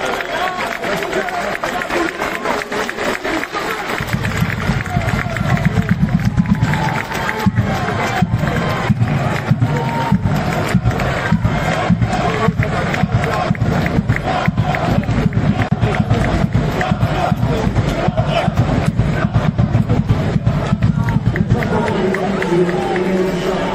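From start to finish the audio carries plainly audible MP3 compression, likely from an encoder running at a low bitrate, which fits about 64 kbps. The treble stops at a fixed ceiling, and weak frequency components flicker in and out between frames, giving a watery, swirling texture with metallic chirps on bright, hissy content and softened attacks. What separates this from a simple low-pass filter is the frame-to-frame shimmer, not just the missing top end.

At 15.69 s the sound breaks off in a gap of about 28 ms, ending at 15.71 s. This is a gap at a join of encoded pieces. Two separately encoded segments were butted together without trimming the encoder's start-up delay and the padding on the final frame, so that dead air stays in. The edges are smeared by the codec, so the truly silent part is shorter than the gap, and the sound resumes exactly where it left off. That clean resumption with nothing lost tells it apart from a dropout, where material goes missing.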